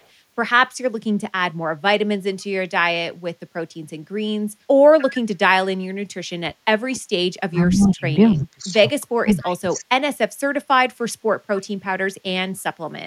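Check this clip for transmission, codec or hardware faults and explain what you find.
You've got three echo-canceller problems in this speech clip, all pointing to a speakerphone on one side of the call.

Echo leak shows up briefly at 4.99 to 5.05 s, 9.44 to 9.54 s and 11.56 to 11.63 s. Each time, a faint copy of the voice comes back about 294 ms late, roughly 20 to 25 dB down. That's likely loudspeaker pickup the canceller didn't fully remove.

Speech suppressed in double talk hits at 6.43 to 6.52 s, 7.46 to 8.05 s, 8.34 to 8.84 s and 9.01 to 10.02 s. The voice dips and chops, getting deeper each time, from around 15 dB to as much as 35 dB. The likely cause is the canceller mistaking the talker for echo while both sides were speaking.

The background is gated by the echo canceller at 10.3 to 10.4 s. The room sound drops by about 11 dB for roughly a tenth of a second, then comes back. That happens when the canceller clamps the microphone hard while the loudspeaker is playing and then releases it.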